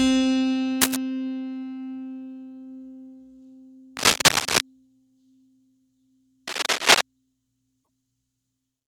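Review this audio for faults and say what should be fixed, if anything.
Scratchy, rustling bursts sit about 5 dB over the music at 0.81–0.96 s, 3.97–4.61 s and 6.47–7.01 s, likely cable scratch noise from a worn connector whose contact resistance jumps as it moves. Swap or clean that cable and strain-relieve it so nothing shifts during the take.

At 7.80–7.88 s there's a short glitch, typical of damaged data in a compressed stream: the decoder misreads the frames and resyncs at the next header. Re-export or re-fetch from a clean source and verify file integrity before delivery.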